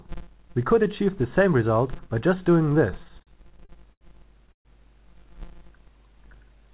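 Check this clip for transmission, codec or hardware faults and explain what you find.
Three faults are audible, carried on a narrowband call path that leaves nothing above 4 kHz.

Filter restarted on every block runs through the whole clip. The filter starts each block from zero, so every block boundary produces a small transient. That gives a 172 Hz buzz, which fits a 256-sample buffer, and it rises and falls with the signal's level. A spectrogram shows a harmonic comb at 172 Hz spacing. The waveform shows regularly spaced ticks.

Repeated stalls (stutter) run from 3.04 to 4.03 s. Packets kept arriving late, and the jitter buffer emptied eight times. The receiver stretched the last sound across about 209 ms in total, roughly a fifth of that span, with the longest gap 80 ms. Nothing is lost, but the audio drags and hiccups. The spectrogram shows repeated smeared, frozen frames.

A call audio freeze follows from 4.52 to 4.67 s. 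The sound holds briefly, fades, and then goes silent for about 110 ms before continuing where it stopped, about 130 ms later than it should. The likely cause is packets held up in transit. The waveform shows a decaying tail followed by a flat gap.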